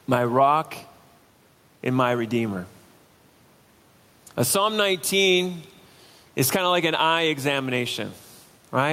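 Gain pumping runs through the whole speech recording. The level breathes by around 5 dB. The room noise sits about 37 dB below the speech. The likely cause is excessive input gain driving a fast limiter.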